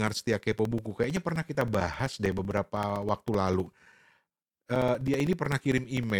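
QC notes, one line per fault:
0.08–6.10 s, periodic USB or driver dropouts: something stalls the USB bus or audio driver every 64 ms, blanking a few milliseconds of audio to silence each time, which gives about a hundred evenly spaced ticks that are heard only while speech is present.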